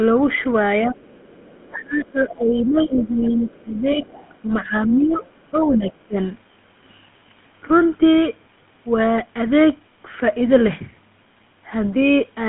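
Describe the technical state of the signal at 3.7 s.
The GSM full-rate codec, running throughout and consistent with a 13 kbps coder, limits the line to 150 Hz to 3.5 kHz, giving a clearly buzzy, gravelly roughness. Between 1.6 and 6.17 s, the echo canceller likely mistook overlapping talk for echo, causing speech suppressed in double talk: the voice dips by up to about 15 dB. From 3.22 to 4.42 s, the other side's voice is leaking through, likely residual loudspeaker echo the canceller missed, as a faint second voice about 25 dB below the talker.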